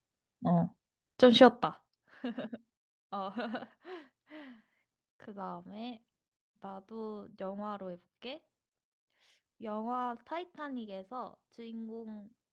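Speech clip, no technical faults heard; the band tops out around 12 kHz, consistent with an Opus call path.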